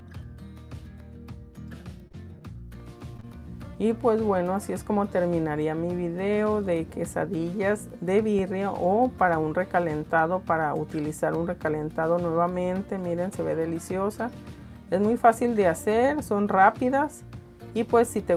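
Short concealed packet loss breaks the audio four times, at 2.07, 2.12, 3.17 and 3.20 s. Each gap of about 20 ms, which fits a lost 20 ms packet, was patched by extending the preceding sound. The patches last 10 to 28 ms, and the 3.17 s one adds a little extra time. They are heard as brief smears or wobbles. A phantom power thump lands at 8.39 s. A supply switching on or off on a live input sent a low step through the coupling capacitors. It is a deep knock that dies away in about 16 ms.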